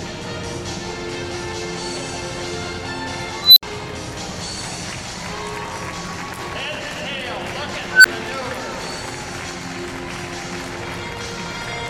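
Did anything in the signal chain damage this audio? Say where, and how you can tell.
Yes. An unstable filter in the processing stage fails twice, at 3.41 to 3.63 s and 7.91 to 8.05 s. Each time a tone of roughly 4 kHz, then roughly 1.5 kHz, swells to clipping within about 0.16 s and 0.14 s, then drops to silence for about 65 ms and 11 ms while the filter resets. A recursive filter with bad coefficients feeds its output back until the numbers overflow. Acoustic feedback howl builds more slowly and never ends in a hard dropout like this.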